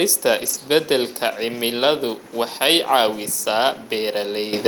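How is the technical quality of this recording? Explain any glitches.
The recording has two audible glitches, one near the start and one right at the end.

From 0.37 to 0.55 s the speech turns rough and grainy for a moment, yet it never drops out. This is a lost packet rebuilt from error correction. Five separate packets went missing, and each following packet carried a low-bitrate backup copy that the Opus decoder played in its place. That filled the hole without silence, but at reduced fidelity. About 100 ms of the audio in this stretch is those coarser stand-in frames.

At 4.53 s the level suddenly jumps by about 11 dB, with speech and background rising together in a single step. This is the microphone volume stepped up. The call software judged the input too quiet and raised the device's input volume all at once rather than gradually. Because the boost was applied at the device, everything the microphone picks up gets louder at the same instant.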